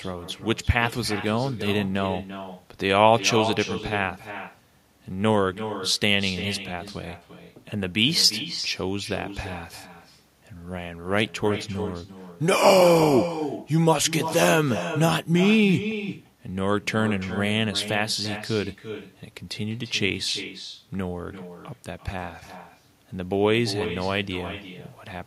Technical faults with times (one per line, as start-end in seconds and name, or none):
0.00-25.26 echo with no canceller